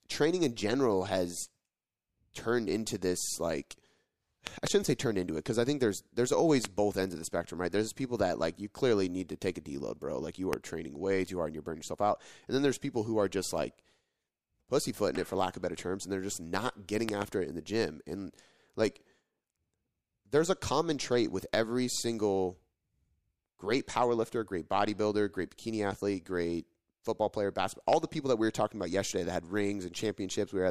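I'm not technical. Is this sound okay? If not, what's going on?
No. The speech has loud pops, sharp clicks much louder than the voice, at 4.47 to 4.69 s (two in quick succession), 6.65 to 6.67 s, 10.53 to 10.55 s, 17.09 to 17.24 s (two) and 27.93 to 27.95 s. They are likely electrical jolts from a plug, switch or static, added on top while the speech continues underneath.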